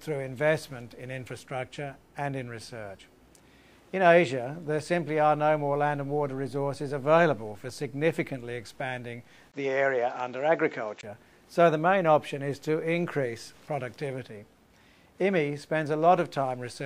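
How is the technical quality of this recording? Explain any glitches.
One glitch spoils the recording's quality. From 9.52 to 11.03 s the sound turns dull, cut above 7.6 kHz after a 20 ms gap. The likely cause is an input switched to a poorer device. Unlike a plain filter, it also brings a new noise floor and a level change of a few dB.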